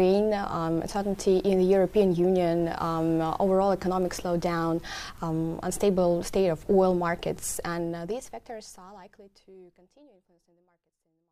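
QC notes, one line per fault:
No faults found; the level eases down in a smooth fade-out from around 7.5 s to 11.3 s, with no click or hard edge at the end.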